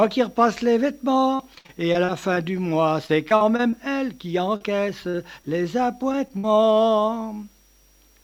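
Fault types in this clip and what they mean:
Repeated packet loss (robotic sound): Many short holes arrive close together, each patched by stretching the previous sound. In this clip that happens over 1.35 to 2.38 s (seven gaps, the longest 61 ms, about a fifth of the stretch patched), 3.06 to 3.74 s (five gaps) and 4.56 to 5.47 s (four gaps). Unlike a single short dropout, the rapid succession gives a sustained choppy texture with pieces missing.
Short concealed packet loss: An isolated hole of roughly 20 ms, filled by continuing the last sound and then blending back into the real signal. Here it occurs at about 6.12 to 6.15 s and again at 6.28 to 6.31 s, heard as a brief smear or wobble. It differs from the robotic stretches because each event stands alone rather than repeating in a cluster, so it never builds into a sustained mechanical tone.
Burst of packet loss: Several consecutive packets go missing, so the concealment has to extend the last sound much longer and fade it as the gap goes on. 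At 6.38 to 6.45 s about 60 ms is lost, longer than the two brief patches just before it. It sounds like a held buzz or fading hiss, and then the audio resumes further on with the intervening part gone, rather than as a momentary smear.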